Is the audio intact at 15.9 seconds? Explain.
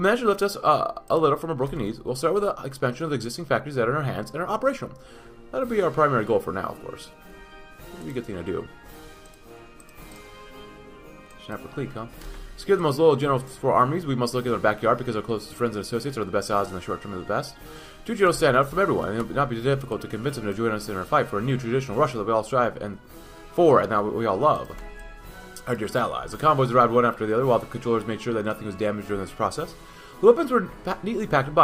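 Yes, the audio is intact at 15.9 seconds, with no dropout, click, distortion or other fault at that point.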